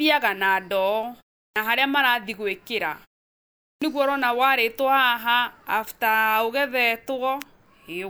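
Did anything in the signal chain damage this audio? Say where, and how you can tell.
Yes: clipped start after a pause, at playback. The output device sleeps in gaps and wakes late, so speech starts abruptly, missing 59 ms at 1.50 s and 56 ms at 3.76 s.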